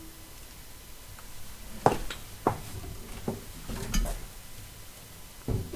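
Nothing stood out on listening to this recording of sounds.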